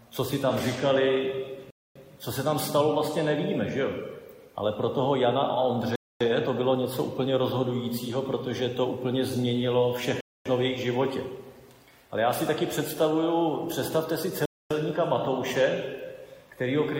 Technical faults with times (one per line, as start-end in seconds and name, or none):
1.71-1.96 gap between chunks
5.96-6.21 gap between chunks
10.21-10.46 gap between chunks
14.46-14.71 gap between chunks